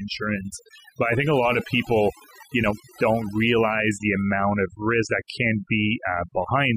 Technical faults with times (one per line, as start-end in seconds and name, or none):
0.00-6.76 overdone noise removal